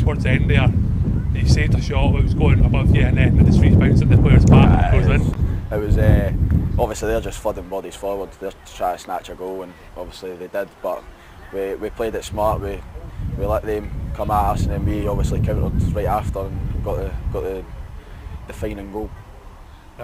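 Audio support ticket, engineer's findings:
Crude rate conversion, 5.21 s to end: gritty inharmonic fizz tracking loud, high content, about 30 dB under signal. Nearest-sample 32 kHz to 44.1 kHz resampler repeating samples, not steady noise.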